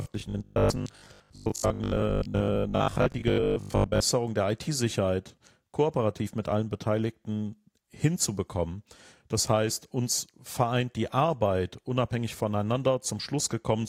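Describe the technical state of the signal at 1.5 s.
At 1.5 s you're inside robotic sound from repeated short buffers, running 0.02 to 4.04 s: a rigid 50 Hz metallic buzz, likely from a 20 ms buffer being replayed for about half the audio.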